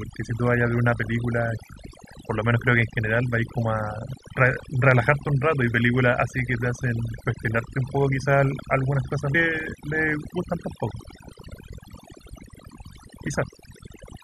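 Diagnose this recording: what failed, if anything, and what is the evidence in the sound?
Overdone noise removal runs through the whole speech clip, at the processing stage. The suppressor gates individual frequency bands it judges to be noise, so the background drops and breaks up into twinkling specks, and quieter parts of the voice are cut too.

A stream segment skipped at 9.34 s, at the network or playback stage. The speech jumps abruptly forward with a small blip. The likely cause is that one segment of the stream failed to load and the player continued with the next one.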